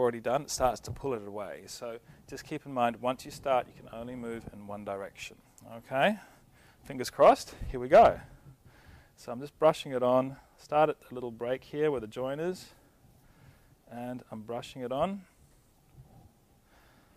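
No technical faults can be heard anywhere in the audio. Nothing in it points to trouble in the recording or playback chain.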